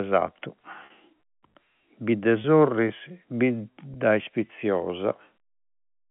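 At 0.86 to 0.90 s, 2.42 to 2.44 s and 3.94 to 3.96 s the speech briefly freezes into a held, slightly buzzy tone. This is packet loss with pitch repetition: the receiver filled each gap by looping the last pitch period. The first gap is 40 ms, which fits two lost packets, and the others are 20 ms each. Unlike a plain dropout, there is no silence or click, only a short sustained buzz within the narrowband telephone sound.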